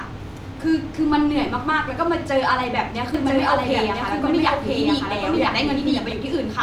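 A doubled audio track runs from 3.14 s to 6.12 s: a second, full-band copy of the speech trails the original by about a second, at roughly equal loudness, with no decay or room colour, and it starts and stops abruptly, likely from a slower second capture path.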